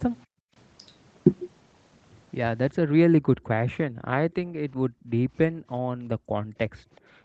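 Background gated by the echo canceller comes first, at 0.26 to 0.55 s, when the room sound drops by about 40 dB while the far-end loudspeaker plays. The canceller clamps the microphone, so the ambience vanishes and returns. It recurs at 3.25 to 3.5 s and 3.89 to 4.08 s (both about 40 dB) and 4.44 to 4.5 s (about 24 dB).

Speech suppressed in double talk follows at 4.78 to 4.84 s. The speech cuts out sharply and very deeply for a fraction of a second. This is likely the canceller failing to tell the local talker from loudspeaker echo while both sides spoke, and turning everything down.

The background gating returns at 5.52 to 5.68 s, a shallower dip of about 15 dB. From 6.17 s to the end the room sound is held down by about 38 dB.

An echo leak appears at 6.96 to 7.0 s as a brief, very faint scrap of the voice, sitting far below the speech and arriving 377 ms late. Part of the loudspeaker signal likely slipped past the echo canceller and was sent back.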